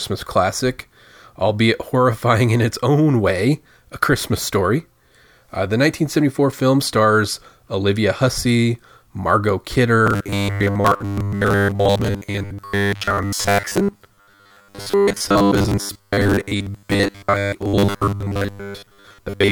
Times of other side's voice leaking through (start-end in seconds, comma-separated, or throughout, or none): none